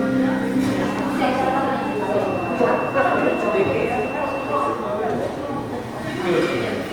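Throughout, the audio was likely squeezed through Opus compression in its music mode at a low rate, consistent with about 24 kbps. Band energies survive but fine detail is refilled, so the sound turns plainly grainy, rough and noisy, while reaching up to 20.2 kHz.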